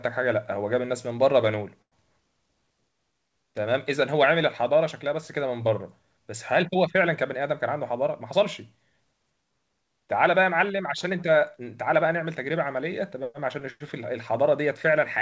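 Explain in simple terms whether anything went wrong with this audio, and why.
Two things went wrong, both from the network side of the call.

At about 1.82 s there's a short stall from a late packet. A chunk of audio didn't arrive on time, so the receiver held the last bit of sound for roughly a tenth of a second (97 ms, until 1.94 s) instead of going silent. Once the packet showed up it carried on from the same spot, so nothing was lost. You'll just hear that sound dragged out a touch too long.

From 12.14 s to 13.25 s there's a jitter buffer speed-up. Audio had piled up in the receiver's waiting area, so it trimmed out lots of tiny slivers, about 70 ms in total, to catch up. The speech runs roughly 5% faster there at the same pitch, so it comes across as slightly hurried.

The call codec itself, G.722, cuts everything above 8 kHz, which is normal for that codec and not a fault.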